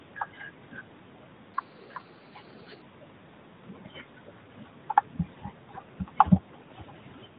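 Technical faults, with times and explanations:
1.54 to 2.82 s, section at the wrong speed: the speech suddenly turns higher and hurried, rising about four semitones, then snaps back to its normal pace and pitch. Pitch and tempo move together because this stretch plays at 1.25 times its recorded speed, likely from being fitted to the wrong clock during editing or playback. The narrowband mobile coding, which removes everything above 4 kHz, carries through the sped-up stretch.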